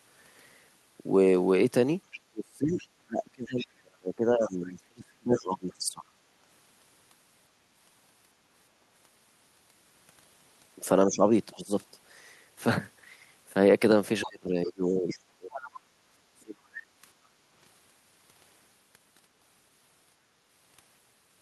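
From 2.11 to 5.73 s there is other side's voice leaking through. The echo canceller has likely failed to remove all of the far end's loudspeaker playback from the microphone, so a second voice sits underneath the speech, roughly 20 dB below it, sounding faint. Overlapping this, from 2.3 to 6.1 s, the speech is suppressed in double talk. With both sides talking, the canceller likely mistook the near talker for echo and clamped down on everything. The speech drops very deeply, by some tens of dB at worst, and is affected for around three seconds in total.

A milder case of the same suppression comes at 11.07 to 11.75 s. The speech dips by a moderate amount for a fraction of a second and sounds briefly pulled back.

From 14.21 to 15.68 s the far-end voice leaks through again at a similarly low level. From 14.25 to 16.85 s the speech is suppressed again in double talk, with deep drops adding up to about two seconds.

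Finally, from 17.18 to 17.48 s, the background is gated by the echo canceller. While the loudspeaker was active, the canceller pulled the microphone down, so the room sound dips by about 6 dB for a moment and then comes back as the canceller releases.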